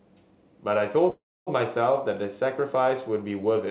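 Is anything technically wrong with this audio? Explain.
Yes. From 1.1 to 1.49 s there is a call audio freeze, likely from delayed packets emptying the jitter buffer. The last sound is drawn out as a fading buzz or hiss, then about 260 ms of silence. The audio resumes with nothing lost, just 366 ms later. On a spectrogram this appears as a smeared, decaying band and then a blank column, all beneath the narrowband 4 kHz ceiling of the G.711 call path. The waveform shows a shrinking tail and then a flat line.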